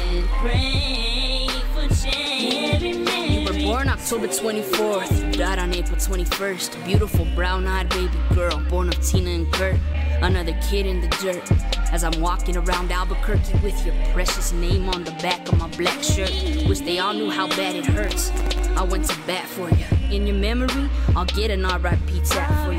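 From 18.04 to 18.62 s, processor overload crackle: a few dozen sub-millisecond buffers miss their deadline and drop to silence, producing a gritty, tearing burst.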